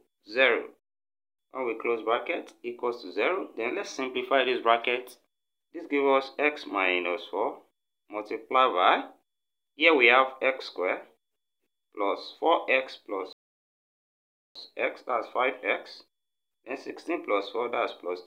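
At 13.33 s the audio drops abruptly to silence and stays silent until 14.56 s, a rebuffering stall lasting about 1.23 s. The player exhausted its store of downloaded audio and had to halt playback until more data arrived. When the sound returns it picks up exactly where it broke off, so no material is missing. The gap simply inserts 1.23 s of dead air, pushing everything after it later.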